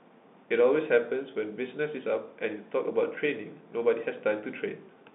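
Nothing stood out on listening to this speech recording.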